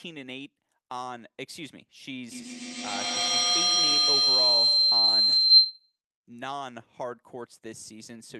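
From 2.32 to 6.0 s a feedback howl grows, not fades like echo, as each loop pass adds level, narrowing to a tone near 4 kHz.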